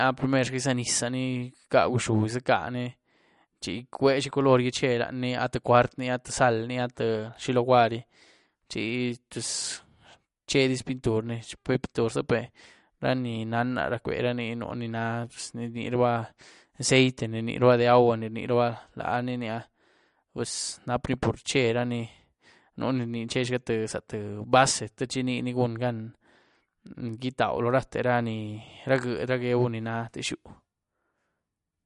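Throughout the recording, the likely cause is MP3 compression at a low bitrate, with a level of damage that fits roughly 48 kbps. Short of bits, the encoder has removed everything above 11.2 kHz and dropped weak frequency detail that comes and goes from frame to frame. The speech sounds dull and plainly processed, with a watery, swirling texture, metallic chirping on s sounds, and smeared attacks on consonants.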